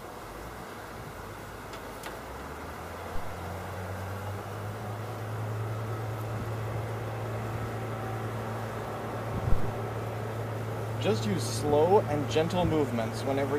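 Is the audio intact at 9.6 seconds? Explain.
No. A phantom power thump runs from 9.52 to 9.75 s: a supply switched on or off on a live input sends a step through the coupling capacitors. It is heard as a deep thump peaking at about −11 dBFS and decaying over 51 ms. On a waveform it is a large, one-sided low-frequency swing, and on a spectrogram a dark low-frequency blob.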